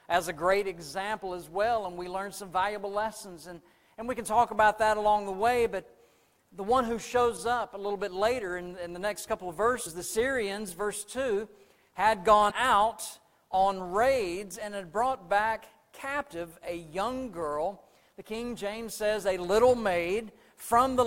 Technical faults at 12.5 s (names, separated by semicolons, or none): filter restarted on every block; damaged data in a compressed stream